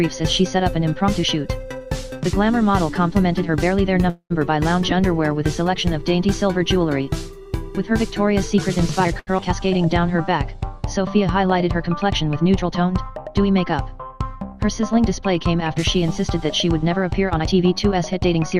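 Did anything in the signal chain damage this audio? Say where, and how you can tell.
Yes, the damage is at the network and jitter-buffer stage. Every fault is a timing repair, not noise or distortion.

Call audio freeze at 4.09–4.32 s: the last sound is held as a fading buzz for about 208 ms, with roughly 80 ms of silence, likely from packets stalling in transit.

Jitter buffer speed-up at 9.04–9.12 s, running about double speed and trimming roughly a tenth of a second. It happens again at 17.35–18.56 s, about 14% fast and cutting around 200 ms. Pitch stays put while tiny pitch-period slices get dropped.

Short stall from a late packet at 9.19–9.29 s: about 81 ms of the current sound gets stretched while the buffer waits, giving a brief held, buzzy moment.

Skip ahead at 9.37–9.40 s: about a tenth of a second is dropped and the two sides are butted together almost directly.

Jitter buffer slow-down at 9.55–11.11 s: playback runs about 7% slow at the same pitch, adding roughly 121 ms by repeating pitch periods to rebuild the buffer's reserve.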